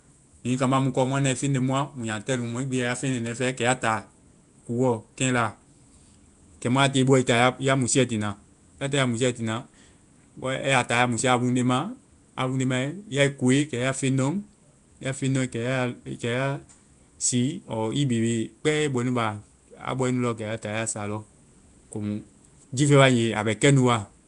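Throughout, likely Nellymoser compression, fitting 44 kbps, leaves weak bands filled with noise: the speech is hissy, smeared and underwater, with nothing above 10.6 kHz.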